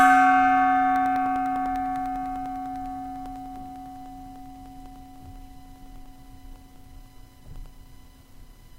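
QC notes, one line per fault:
0.96–8.66 s, periodic USB or driver dropouts: a background task stalls the USB bus or audio driver every 0.1 s, and each time roughly half a millisecond of sound is replaced by silence. The result is around seventy evenly spaced ticks, audible wherever signal is present.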